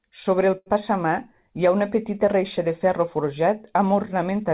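At 0.58 s a packet arrives late, the jitter buffer runs dry, and the receiver bridges the gap by stretching the last bit of speech for about 79 ms, until 0.68 s. This short stall from a late packet loses nothing; the speech resumes exactly where it left off, just 79 ms later than before. What you hear is one sound held unnaturally long, with a slight buzz or dip, inside speech that stops sharply at 4 kHz, consistent with a G.711 call codec.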